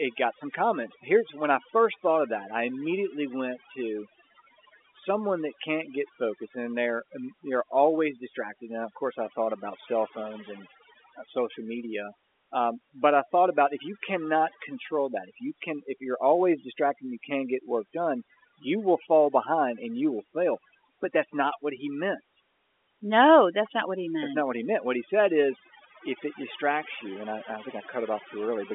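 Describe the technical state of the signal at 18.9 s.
At 18.9 s you're hearing overdone noise removal, and it isn't local to that moment; it runs through the whole clip. The noise reducer was pushed too hard, so any frequency band that sits close to its noise estimate gets pulled way down or shut off, taking the quieter bits of speech with it. The gaps drop away and break up into little twinkly specks, all inside a telephone-width band that tops out around 3.7 kHz.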